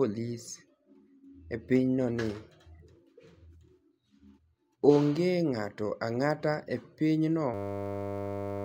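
At 7.54 s the speech gives way to a steady buzz that runs right to the end of the clip. That's a system hang loop: the machine or its audio driver froze, and the sound hardware kept replaying the same 10 ms of buffered audio, over a hundred times. Because the looped piece is so short, it fuses into a 100 Hz drone instead of a stutter, and roughly a second of real audio is gone.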